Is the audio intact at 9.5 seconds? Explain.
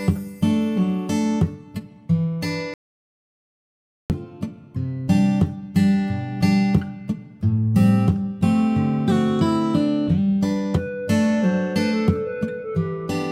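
Yes, the audio is intact at 9.5 seconds, with no fault audible at that moment.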